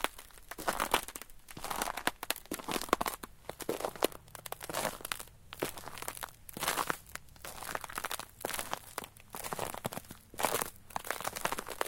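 Nothing stood out as a technical problem on listening to this recording of sounds.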